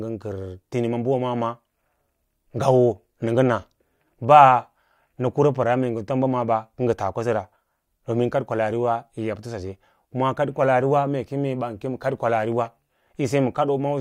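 Listening to the recorded speech, nothing stood out as technically wrong.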